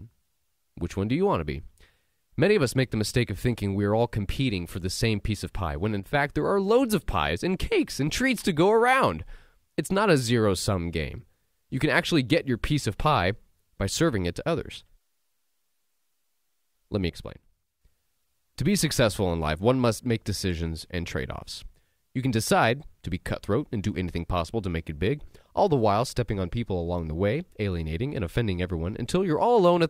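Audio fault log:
6.00–6.14 s and 17.10–17.81 s: one channel drops out. Speech level suddenly falls about 6 dB, first after "piece of pie when". Likely one stereo side lost before mono summing.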